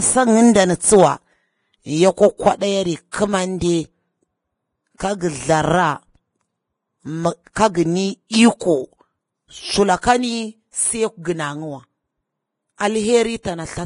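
Vorbis compression runs throughout this speech. Nothing reaches above 10.5 kHz, and coarsely quantised treble turns grainy and hissy, which fits a heavy, likely low-bitrate encode near 28 kbps. Pre-echo appears at 4.97 s, 7.53 s and 13.43 s. Block-wide quantisation noise spills ahead of sharp onsets, giving 23 to 34 ms of hiss before each smeared attack.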